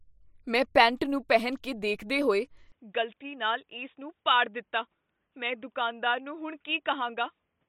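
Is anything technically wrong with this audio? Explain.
Yes. From 2.72 s to the end of the clip the speech suddenly turns narrow and boxy, and nothing is heard above 3.8 kHz. The level also drops by about 5 dB and a new background noise floor appears, roughly 50 dB under the speech. This is likely an input switched to a poorer device, such as another microphone or a headset's call profile. It has a bandwidth, tone, level and noise of its own. There is no gap at the switch. A plain filter or level change would leave the background noise as it was, and here the noise changes too.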